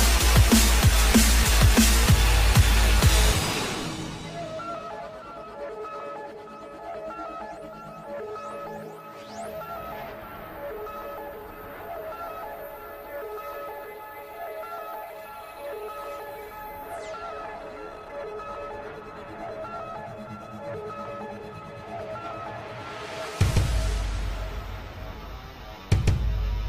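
No technical faults are audible anywhere in the recording.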